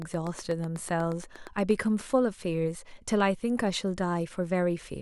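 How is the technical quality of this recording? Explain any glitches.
A train of clicks runs from 0.02 to 1.72 s, at the start of the speech: about fifteen ticks at a steady 8.3 per second, peaking around 5 dB above the speech itself. The likely cause is interference from nearby equipment or a faulty connection or power supply injecting a repeated pulse. Unlike random crackle, these clicks share one shape and keep a regular spacing, and they sit on top of the sound instead of interrupting it the way dropouts would.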